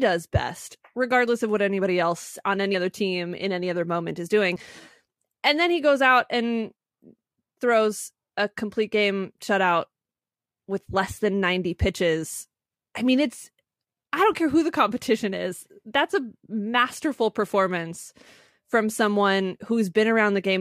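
A jump forward at 2.73 s, between "what anybody else on" and "other team in any", and again at 4.56 s after "other moment is doing". These are compressed frames skipped: a couple of damaged or missing frames, a few tens of milliseconds of audio, were dropped at each point.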